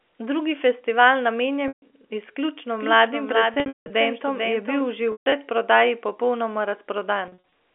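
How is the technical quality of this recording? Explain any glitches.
Two kinds of fault are audible in this telephone-band speech, which is limited to about 300 Hz to 3.4 kHz as expected for G.711 coding.

Packet loss with pitch repetition occurs four times: 1.68 to 1.82 s, 3.54 to 3.90 s, 5.12 to 5.32 s, and 7.28 to 7.38 s. When audio packets fail to arrive, the receiver fills the hole by looping the last pitch cycle it had. This fades out over about 50 ms, and the speech then returns with a brief cross-fade. The first gap is a single 140 ms loss, consistent with 20 ms packets. It sounds like a held, buzzy tone dropping into silence. The 3.54 s event scatters 280 ms of loss over 360 ms, with the longest run at 180 ms. The 5.12 s event has 160 ms lost, mostly in one 140 ms run. Both give a similar buzz-then-hush. The last event's losses are short, at most 40 ms. These come across as stuttery, slightly sustained fragments rather than dropouts. 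The looped pitch buzz distinguishes this from a plain mute, which cuts straight to silence.

A doubled audio track runs from 2.67 to 4.81 s. A second full-band copy of the speech, roughly 5 dB quieter, trails the original by around 0.4 s. It starts and stops abruptly. It is likely a second capture path or an edit holding two offset copies. Unlike a room echo, the copy has no decay and no reverberant colour. It is a clean, repeated layer that makes the speech sound overlapped.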